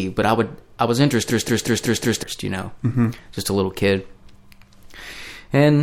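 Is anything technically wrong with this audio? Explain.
Yes. From 1.3 to 2.23 s, right after "i would i was" and before "you know", there is a system hang loop. The driver stalled while the hardware kept replaying one ring buffer, so a 186 ms slice repeats exactly five times at 5.38 Hz. That rate fits an 8192-sample buffer and sounds like a machine-gun stutter, with about a second of speech lost. Unlike a dropout or ordinary glitching, every repeat is identical.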